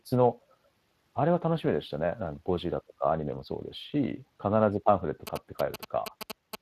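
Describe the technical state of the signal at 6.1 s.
At 6.1 s the speech is hoarse and grainy, with nothing above 15.3 kHz. This is Speex codec damage throughout the clip. The coder's thin excitation budget, consistent with roughly 22 kbps, smears the fine voice detail into noise.

Over that speech, from 5.27 to 6.55 s, comes a galloping dit-dit-dit of short 217 Hz buzzes, only a few dB below the voice. These are GSM signalling bursts: a nearby 2G phone's radio pulses, rectified by the audio circuitry into audible interference.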